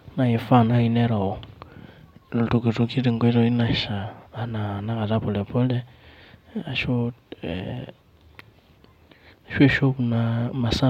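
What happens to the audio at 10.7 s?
Nothing goes wrong at 10.7 s; the audio plays through that moment intact, with no dropout, click or distortion.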